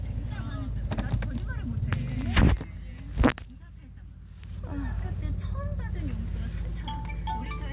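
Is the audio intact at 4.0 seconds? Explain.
Yes, the sound at 4.0 seconds is intact, carried through a call path whose top end stops at about 4 kHz, which fits a narrowband telephone codec.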